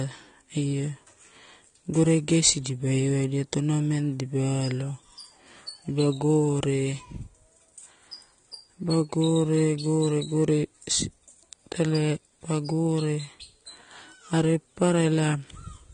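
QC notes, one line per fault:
Throughout: AAC compression. The speech sounds dull and smeared, with plainly audible codec damage and nothing above 9.7 kHz. Likely a low-bitrate AAC-LC encode, which fits something around 32 kbps, where the encoder cuts the top band and starves the remaining spectrum of bits.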